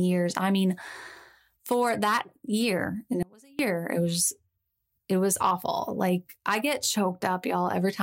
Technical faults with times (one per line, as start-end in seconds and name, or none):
3.23-3.59 audio dropout to a faint residue